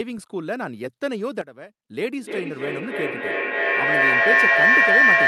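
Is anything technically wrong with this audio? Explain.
Yes, there are two faults.

From 1.41 to 1.89 s there is a sudden gain jump: the level drops by about 12 dB and recovers with no ramp. The background noise steps down together with the speech, unlike a compressor or gate. The likely cause is a digital gain setting applied instantly.

From 2.2 s until the clip ends there is a feedback howl near 2 kHz, with a loop delay of roughly 300 ms, peaking about 11 dB above the speech. A microphone is picking up a loudspeaker on the same call, so each trip round the loop adds level. Unlike echo, the repeats grow and narrow into a tone instead of fading.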